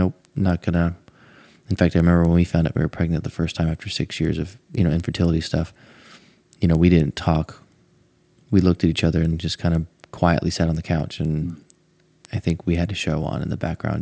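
Throughout, the resampler restarted on every block: each 250 ms block is converted from 48 kHz to 16 kHz separately, leaving edge errors heard as 4 Hz ticks that vanish in pauses, unlike a steady hum.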